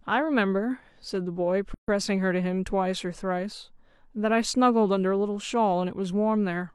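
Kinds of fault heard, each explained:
Gap at a join of encoded pieces: from 1.74 to 1.88 s the speech drops into about 140 ms of silence with smeared edges, then resumes where it stopped, the untrimmed encoder start delay and final-frame padding left in where separately encoded pieces meet.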